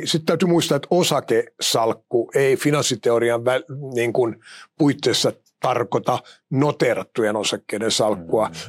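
No audible technical faults anywhere in this speech recording.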